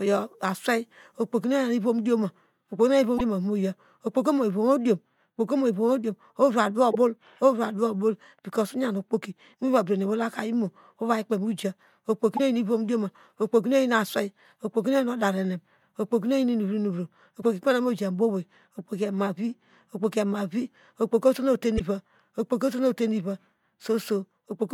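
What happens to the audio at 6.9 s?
Damaged data in the compressed stream hits the speech from 6.90 to 6.96 s. A stretch of the encoded bytes there is corrupted, so the decoder cannot read those frames properly, loses its place in the stream and has to hunt for the next valid frame header before normal decoding resumes. The result is a brief glitch of roughly 50 ms, a chirp, squawk, click or short hole that breaks into the speech.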